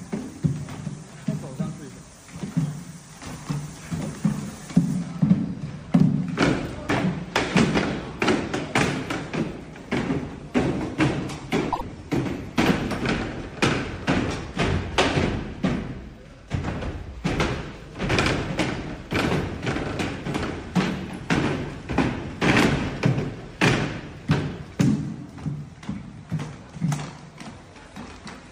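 At around 11.72 s the audio briefly garbles, with a quick flutter that clears by 11.81 s. That's frames out of order: two neighbouring frames, each about 26.1 ms long, got decoded in swapped order, so that tiny stretch plays back-to-front in two chunks. The frame size fits MP3 at 44.1 kHz. Nothing's actually missing and the timing downstream stays intact.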